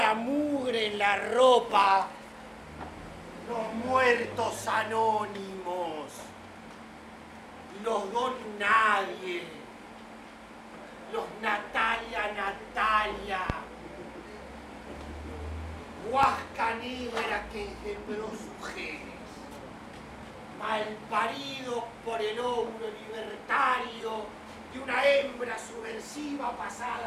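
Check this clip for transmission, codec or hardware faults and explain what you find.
Two loud pops break into the audio, at 13.50 to 13.52 s and again at 16.23 to 16.26 s. Each is a single sharp pop peaking around 20 dB above the surrounding sound, which continues underneath. The likely cause is a brief voltage pulse from a switch, connector or static discharge entering the signal path. On the waveform each appears as a tall narrow spike. On a spectrogram it shows as a thin bright vertical line spanning the whole frequency range.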